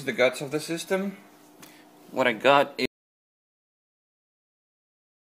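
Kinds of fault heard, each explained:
Audio dropout to silence: sound cuts out at 2.86 s, leaving silence without room tone to the end; likely lost input while recording continued.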